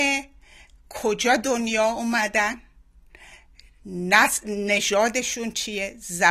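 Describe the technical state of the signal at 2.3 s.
At 2.3 s the player is still on the low-bitrate version of an adaptive stream, chosen so playback could begin quickly before it had measured the connection. That starting stretch runs from 0.0 to 4.80 s. The speech sounds dull, with nothing above 13.5 kHz and stronger codec artefacts, which fits a 32 kbit/s AAC-LC rendition. At 4.80 s the quality steps up abruptly, with no gap, consistent with a switch to 96 kbit/s.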